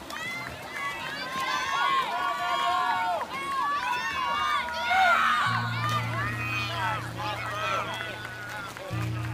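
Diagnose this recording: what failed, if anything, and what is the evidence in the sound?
Overlap-add ripple in frame-based processing from 6.21 s onward: mismatched frame overlap makes the level pulse about 11 dB near 200 Hz. The result is a steady metallic buzz with extra tones around each note rather than irregular dropouts.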